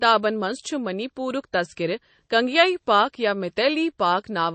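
A watery, swirling texture runs through the whole of this speech recording, with s sounds turning metallic and chirpy, consonant attacks smeared, and nothing above 8.3 kHz. The likely cause is MP3 compression at a low bitrate, with damage that fits roughly 32 kbps. Short of bits, the encoder cuts the treble at a fixed frequency and zeroes weaker frequency lines, which flicker on and off from frame to frame.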